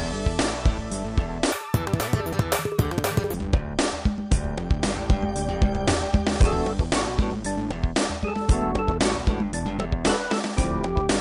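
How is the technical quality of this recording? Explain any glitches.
There is one clear glitch, a wrong sample rate, from 1.52 to 3.34 s. The audio is played back at about twice its recorded rate, which fits 22 kHz material read out at 44.1 kHz without conversion. It runs twice as fast and sounds a full octave (12 semitones) higher. On a spectrogram, every component jumps to double its frequency and events squeeze closer together. On the waveform, the cycles look visibly denser.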